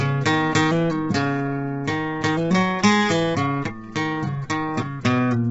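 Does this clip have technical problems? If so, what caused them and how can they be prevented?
Yes. Low-delay AAC compression affects the whole music clip: nothing reaches above 7.8 kHz, and the sound turns rough and grainy, with noise filling the gaps between harmonics. The likely cause is AAC-ELD, whose short frames resolve pitch poorly, starved at a bitrate that fits roughly 16 kbps. To prevent it, give the low-delay codec a much higher bitrate, or use standard AAC where delay doesn't matter.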